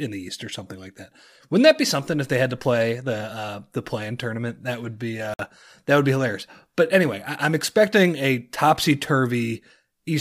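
At 5.34 s the speech cuts abruptly to silence for 54 ms. It resumes at 5.39 s, with no fade either side. This is a Bluetooth stall. Radio interference likely held up packets. The headphone buffer ran empty, and playback paused until the resent data arrived.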